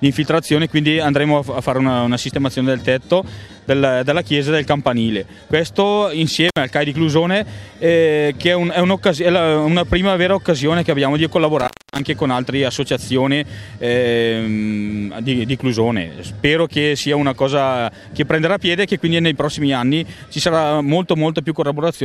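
At 6.49 s and again from 11.59 to 12.03 s, intermittent contact drops the sound for about 60 ms and then 278 ms, with crackle at each break as the loose connection opens.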